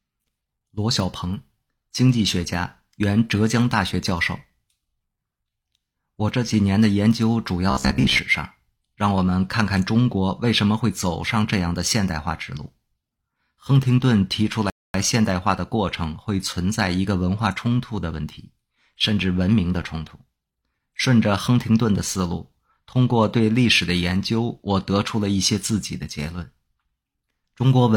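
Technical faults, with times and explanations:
7.71–8.19 s, robotic sound from repeated short buffers: for about half a second the speech turns into a rigid, metallic buzz near 66.8 Hz that still loosely tracks the syllables. The likely cause is audio arriving too seldom, so playback keeps looping a fragment of roughly 15 ms, which fits that 66.8 Hz buzz, while most of the real signal in this stretch is skipped. Unlike a stall, sound never stops, and the fixed, machine-like pitch sets it apart from ordinary distortion.
14.70–14.94 s, rebuffering stall: the speech cuts to complete silence for about 0.24 s and then picks up exactly where it left off. Playback ran out of downloaded audio and waited for more, so nothing is skipped and the gap simply adds that time to the clip. A dropout would lose the audio that fell in the gap. Here the continuation is seamless, and, unlike the buzz earlier, no repeated fragment fills the pause.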